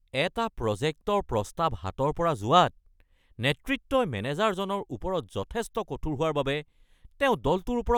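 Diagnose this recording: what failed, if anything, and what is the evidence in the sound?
Nothing failed: the recording shows no audible evidence of a fault at any stage.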